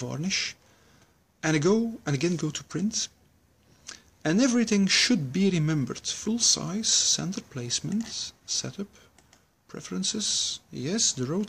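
No technical faults can be heard anywhere in the recording. Nothing in the sound calls for a timed note or an explanation.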